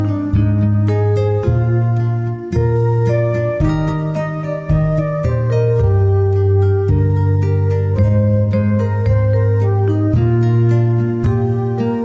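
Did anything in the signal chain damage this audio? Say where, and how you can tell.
No, nothing in the signal chain has damaged this audio. At no point does any stage, from capture through to playback, leave an audible mark on the sound.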